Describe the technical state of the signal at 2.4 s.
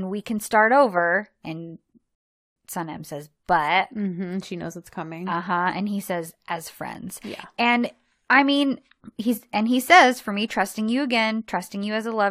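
At 2.4 s the speech sits inside a rebuffering stall, 2.15 to 2.56 s: the player exhausted its buffer, went silent, then resumed exactly where it stopped, adding 0.41 s.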